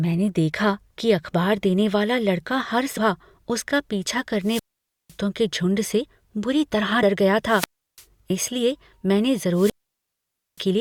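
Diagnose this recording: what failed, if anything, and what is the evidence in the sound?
Damaged data in the compressed stream, a codec or storage fault: short blips at 2.96 s and at 7.02 s, just after "बुरी तरह". Corrupted bytes there made the decoder misread the frames, lose sync and resume at the next valid frame header.

Wireless microphone squelch dropout on the analogue radio link, at 4.41–5.17 s (before "के झुंड"), 7.45–8.05 s (before "इसलिए मैंने") and 9.51–10.66 s. Each time the FM signal faded, hiss rose, then squelch muted the output for 0.5 s, 0.34 s and 0.88 s respectively.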